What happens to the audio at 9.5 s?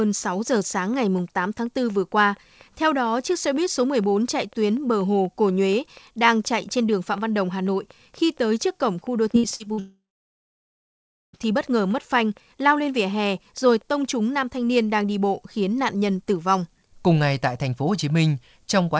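Around 9.5 s the sound turns choppy, with brief pieces dropping out between 9.32 and 9.79 s. This is repeated packet loss (robotic sound): five holes, the longest about 58 ms, were each patched by stretching the preceding audio, so roughly a third of that half-second is filled-in rather than real.

Underneath, a steady ticking continues. It is a train of clicks running from the start to 14.06 s at about 4.2 per second, regularly spaced and peaking near the level of the sound itself, likely from electrical interference or a faulty connection or power supply.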